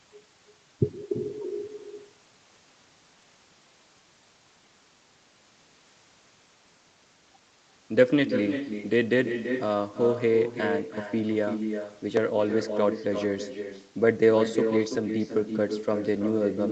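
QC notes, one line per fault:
Throughout: echo with no canceller. Every stretch of speech is followed roughly a third of a second later by a second copy about 7 dB quieter, sounding thinner than the direct sound. The far end is playing the call through a loudspeaker, and its microphone picks that playback up and sends it back. Nothing in the chain subtracts it, so the talker's own voice returns after the network round trip and overlaps what comes next.
12.17 s: dropped buffer (overrun). A small jump in the sound is heard with no gap of silence, as if a sliver of audio, only a millisecond or two, has been cut out and the edges butted together. The likely cause is the recording software falling behind so that the hardware overwrote samples before they were read. The discontinuity at the join produces the jump, and the missing piece is too short to take out any part of a word.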